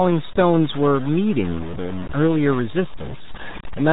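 From the start of the speech and throughout, nothing above 3.8 kHz survives, leaving a muffled, gargly, band-limited sound typical of the RealAudio 14.4 codec. The heavy gargly muffling points to an 8 kbit/s dial-up speech codec discarding most spectral detail.

Over the whole clip, a coarse grainy distortion rides on the speech, sitting only around 15 dB below the signal and changing with it; quiet passages turn gritty and sputter. This is likely low bit depth without dither, consistent with truncation to about 5 bits.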